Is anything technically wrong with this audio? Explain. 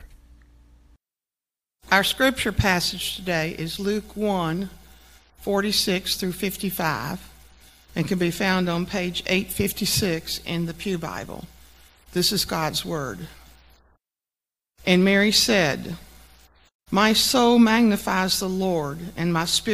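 No, nothing technical stands out here; it all comes across just as it should, so there's nothing to flag.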